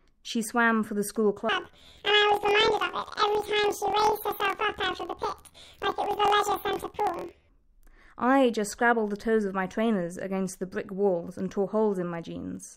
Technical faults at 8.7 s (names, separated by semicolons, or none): none